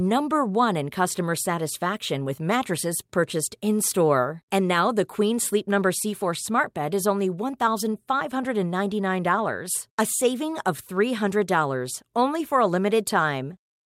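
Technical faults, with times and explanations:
No technical faults can be heard anywhere in this speech recording. Nothing in the audio points to a problem in how it was captured, processed or passed along.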